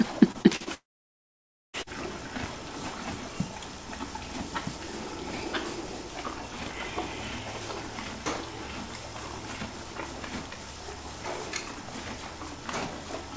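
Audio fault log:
0.32–0.68 s, repeated packet loss (robotic sound): four separate packet gaps, the longest 38 ms, were each patched by stretching the preceding sound. About 28% of this span is concealment, so the sound turns choppy, with short pieces missing.
0.74–1.75 s, long network dropout: about one second of sound is gone. The last sound stretches into a brief fading buzz or hiss, then roughly 0.93 s of silence follows before audio resumes, likely because the network stopped delivering packets entirely.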